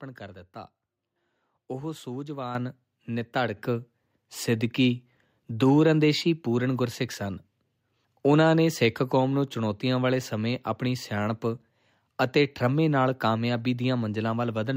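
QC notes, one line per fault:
2.55 s and 3.57 s, microphone volume stepped up: the input gain jumps by about 8 dB, then about 4 dB more, lifting the speech and background together as the software boosts a quiet mic.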